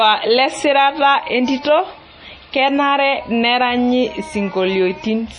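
Throughout, the speech sounds watery and swirly, likely heavy MP3 compression; a spectrogram shows a hard ceiling at 10.5 kHz and flickering gaps below.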